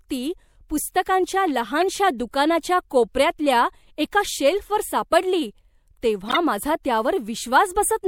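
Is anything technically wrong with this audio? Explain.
Yes. The speech has two stretches of corrupt frames that were decoded and played. The first is brief, at 1.81 s. The second lasts from 6.28 to 6.37 s. In each case, bits inside a few compressed frames were damaged. The decoder still played them, reading wrong gains and codes, so energy landed at the wrong frequencies. The first is quieter. The second is much louder.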